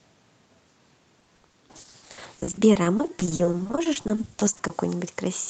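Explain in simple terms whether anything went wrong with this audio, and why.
Yes, from about 1.19 to 4.71 s there's repeated packet loss (robotic sound): dozens of short dropouts, patched by stretching earlier sound, leave the speech choppy with pieces missing.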